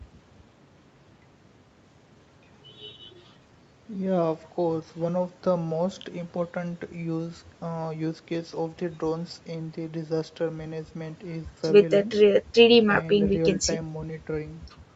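No faults in this speech; the call path's band limit around 8 kHz is normal for it.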